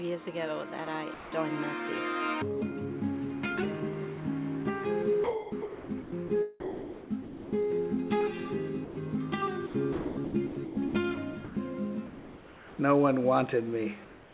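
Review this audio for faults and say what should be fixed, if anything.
Sound dropped by the voice detector at 1.14 to 1.32 s, 8.85 to 8.97 s and 11.45 to 11.57 s: short stretches, 180 ms and then 120 ms each, give way to flat synthetic noise, likely because the sender's detector mistook quiet sound for background and stopped transmitting until it triggered again.

Sound chopped by the voice detector at 5.24 to 6.30 s, 6.60 to 7.53 s and 9.67 to 10.95 s: the audio repeatedly breaks up, with roughly 0.7 to 0.8 s of each stretch swapped for comfort noise, as the detector likely toggles transmission on and off.

Comfort noise in place of the background at 12.07 to 12.79 s and 14.05 to 14.33 s: the real background, about 20 to 23 dB below the loud parts, turns into a steady, featureless hiss about 2 dB and about 1 dB quieter respectively. This is likely discontinuous transmission filling the pauses, on a G.711 path where nothing reaches above 4 kHz.

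To prevent all three, disable discontinuous transmission on the sender or make its voice detector less aggressive, with a longer hangover time, so quiet sound and background keep being sent.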